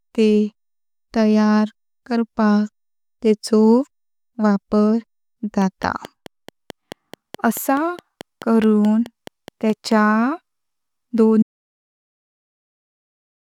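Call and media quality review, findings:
Train of clicks, 5.62 to 9.93 s. Steady ticking at 4.65 per second, roughly twenty clicks, peaking about 5 dB over the speech and audible in the pauses too. Likely interference from nearby gear or a faulty connection or power supply.

Audio dropout to silence, 11.43 s to the end. The speech cuts off mid-flow into silence with no room tone at all. Likely a lost input, such as an unplugged device, a dropped link or a stray mute, while the encoder kept writing silence.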